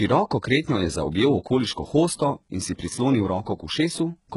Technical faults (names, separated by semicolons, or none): HE-AAC compression